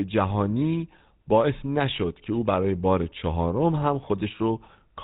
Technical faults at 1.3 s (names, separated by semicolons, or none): GSM full-rate codec